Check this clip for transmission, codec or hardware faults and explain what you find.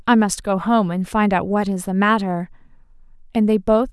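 Nothing in the speech signal points to a transmission, codec or hardware problem.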